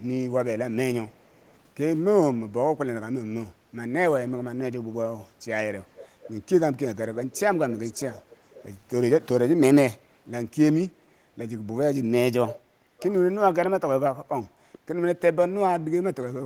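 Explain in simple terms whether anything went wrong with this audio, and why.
Two problems can be heard in this speech. There is an echo leak: faint delayed repeats of the voice at 1.12–1.51, 5.95–6.33, 7.31–7.40, 7.71–8.63, 12.47–12.56 and 12.98–13.08 s, trailing roughly half a second behind. The likely cause is a loudspeaker at the far end whose echo canceller let some sound slip back. Unlike room reverberation, these repeats are separate, late copies, not a smooth tail.

There is also background gated by the echo canceller: the room sound briefly dips around 5.27–5.39 s and again at 12.74–12.78 s, then returns. Nothing is repeated here. The background is simply turned down for a split second, not cut by a network dropout.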